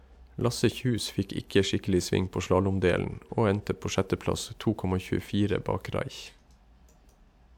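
No technical faults detected.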